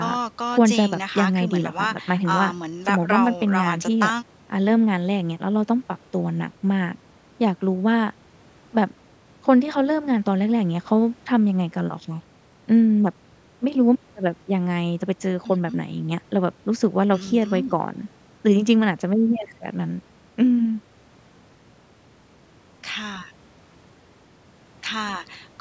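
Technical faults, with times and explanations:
No faults detected in this speech; the call microphone processing is working as expected, its high-pass filter trimming the lowest bass, and nothing is present above 8 kHz.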